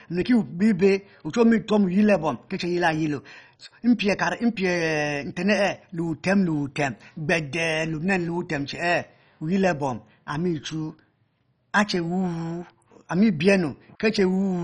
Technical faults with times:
0.00-14.64 MP2 compression

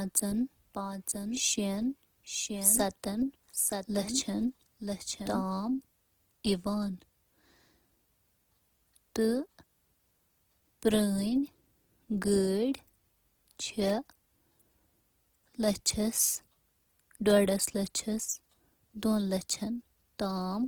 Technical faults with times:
0.00-20.68 Opus compression
0.00-5.44 doubled audio track

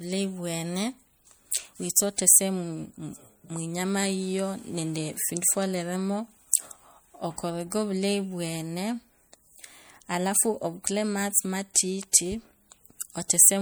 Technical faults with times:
0.00-13.61 MP3 compression

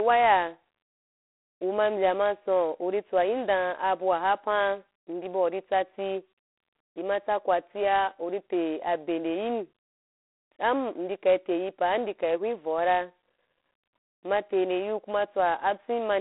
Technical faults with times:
0.00-16.20 G.726 ADPCM

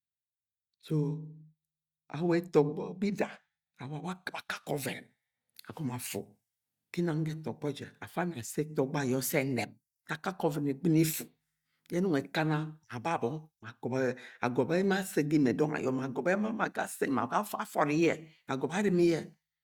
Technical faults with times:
none

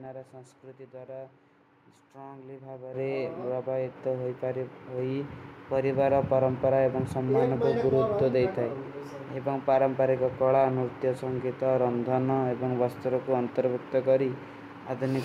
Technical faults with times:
2.94 microphone volume stepped up

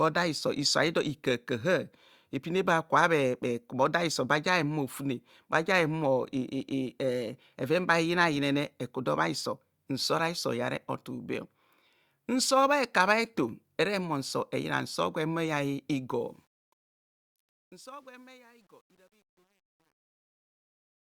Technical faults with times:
16.10-21.07 truncation distortion on a fade

